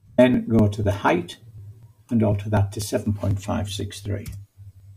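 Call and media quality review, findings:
Periodic USB or driver dropouts, 0.10 s to 4.8 s: regular ticks every 0.248 s, about four per second, roughly twenty in all. Host background task stalling the USB bus or audio driver; around 2 ms of audio skipped each time, splicing waveform discontinuities. Spectrogram: evenly spaced thin vertical broadband lines, present only where signal is.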